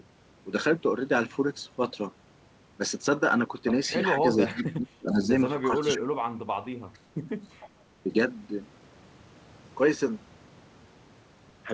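It's a speech clip over a call link, and the band stops at 8 kHz, which fits a wideband G.722 path at around 64 kbps. The main problem is speech suppressed in double talk: the voice sinks by about 30 dB from 4.13 to 5.31 s, with roughly a second of it chewed away, and again from 5.68 to 6.21 s for a bit under half a second. Then there's a milder dip of about 10 dB at 8.03 to 8.12 s. It sounds like the far end talked over this side, and the echo canceller, unsure what was echo, likely clamped everything down. Alongside that there's echo leak: short, delayed copies of the voice trailing it by 453 ms, at 4.57 to 4.63 s (about 15 dB under the speech), 5.78 to 5.87 s (about 20 dB down), 6.93 to 6.99 s (a faint trace, about 35 dB down) and 7.44 to 7.69 s (about 25 dB down). That's the signature of a loudspeaker on one end whose canceller likely didn't scrub all of its own pickup, so bits get bounced back.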